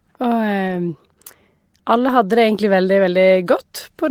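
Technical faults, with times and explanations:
0.67–0.77 s and 2.03–2.09 s, lost packet rebuilt from error correction: the speech never drops out, but these two short stretches turn grainy and noisier before clearing again. The first stretch is about 100 ms long, with about 60 ms of it rebuilt, which fits three 20 ms packets. The second is about 60 ms long, with about 40 ms rebuilt, which fits two. The lost audio was filled from the low-bitrate backup copy carried in each following packet, so there is no gap, only this coarser sound.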